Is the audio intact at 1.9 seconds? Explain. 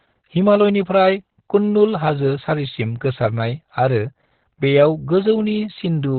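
No. At 1.9 seconds the speech carries heavy Opus voice compression, as it does for the whole clip. Nothing is audible above about 4.3 kHz. That points to Opus running its SILK linear-prediction coder in narrowband mode at a very low bitrate, around 8 kbps. The encoder discards the upper band and codes the excitation coarsely in 20 ms frames. The voice sounds muffled and hoarse, with a slightly robotic edge.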